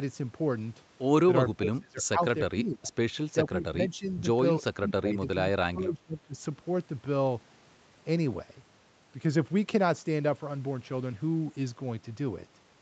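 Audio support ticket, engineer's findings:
Speech suppressed in double talk: near-end speech ducks hard, around 20 to 25 dB, at 1.53–2.21, 2.53–2.96, 3.47–4.28, 4.72–5.35, 5.51–5.56 and 5.72–6.40 s. It sounds chopped and pumping, in pieces of up to about 0.7 s. Likely the echo canceller failing to separate near-end talk from the far end's loudspeaker echo and clamping down on both. Top end stops at 8 kHz throughout, as expected from the Opus call path.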